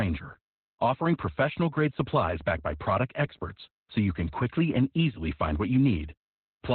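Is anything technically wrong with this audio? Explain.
Yes. Throughout the speech there is heavy Opus voice compression. The codec has dropped to narrowband SILK linear-prediction coding, with nothing above 4.4 kHz, which fits a very low bitrate around 8 kbps. The coarsely coded excitation leaves the speech muffled, hoarse and slightly robotic.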